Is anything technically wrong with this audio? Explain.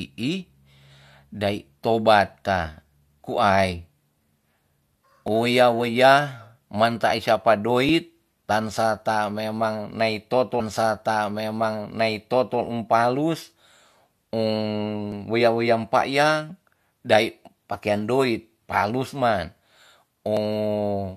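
Yes, there are two problems, both on the speech.

The first is clock drift buffer slips. From about 2.66 s through to 20.37 s there's a small click or pop roughly every 2.61 s, around seven in all, regular as a metronome. The likely cause is two devices in the chain each running on their own clock, mismatched by a few hundred parts per million. The buffer between them slowly creeps full or empty until a chunk of a few dozen samples gets dropped or repeated, and each of those jumps is a click.

The second is a stream segment repeated. At 10.59 s the audio jumps back and replays a stretch, running to 12.59 s, so about 2.0 s of the programme is heard twice, with a little blip right at the jump point. That happens when the player fetches or queues the same segment twice, so the listener gets a short déjà vu and the clip runs about two seconds longer than it should.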